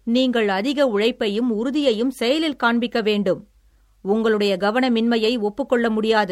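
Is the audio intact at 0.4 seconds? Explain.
Yes, the speech at 0.4 seconds plays through intact, with no dropout, click, distortion or other technical fault at that moment.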